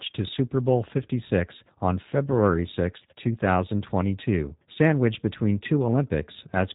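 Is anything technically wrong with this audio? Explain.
Yes, the whole clip has been through a G.729 codec, and the damage is plainly audible from start to finish. G.729 rebuilds speech from a vocal tract filter, a pitch predictor and a few coded pulses per 10 ms frame, which fits a low-rate 8 kbit/s VoIP link. That's why the voice sounds slightly rough and synthetic, and there's essentially nothing above 3.8 kHz, so it has that dull, boxed-in phone quality.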